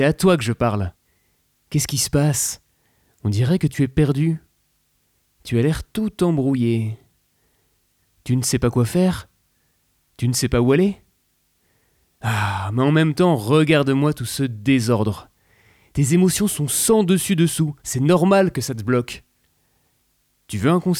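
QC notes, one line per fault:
No fault heard at any point in the clip.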